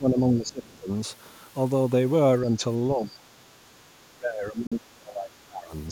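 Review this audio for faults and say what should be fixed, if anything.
Speech suppressed in double talk, 0.00–0.91 s, 2.94–3.76 s and 4.15–5.71 s: the speech sinks by around 20 dB, reaching about 25 dB in the last stretch. This is likely an echo canceller that heard both ends at once and ducked the near talker along with the echo. Fix it by tuning the canceller's double-talk detection so it stops turning down the near talker when both sides speak.

Bluetooth dropout, 4.67–4.73 s: a hole of about 46 ms silences the sound, inside the last suppressed stretch. It resumes as if it had kept playing, likely because a couple of packets missed the headphones' deadline and were discarded. Fix it by giving the wireless link a stronger connection with less interference, or more buffering at the receiver.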